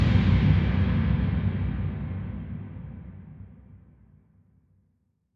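No technical faults are audible.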